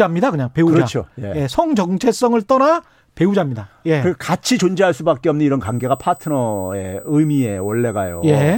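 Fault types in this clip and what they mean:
USB whine: a fixed-pitch tone from 5.65 s to the end, built on 8 kHz with its strongest component at 16 kHz, roughly 20 dB below the speech, fitting 125-microsecond microframe current draw leaking through power or ground; a spectrogram shows steady horizontal lines there.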